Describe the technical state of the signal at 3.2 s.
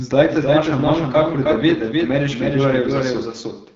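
At 3.2 s, as everywhere in the clip, a doubled audio track is heard: a second full-band copy about 5 dB down trails by roughly 300 ms, likely from a slower capture path. The AMR wideband (HD Voice) codec is also plainly audible there, with rough, raspy speech and nothing above 7.5 kHz, which fits a low rate near 8.85 kbit/s.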